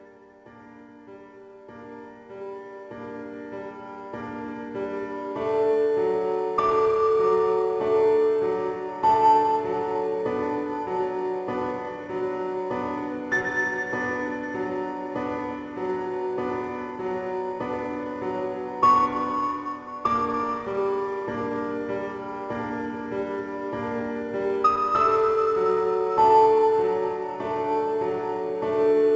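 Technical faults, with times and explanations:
No technical faults are present; the signal has the character of a WebRTC call path, with nothing above 8 kHz, which fits the G.722 wideband codec.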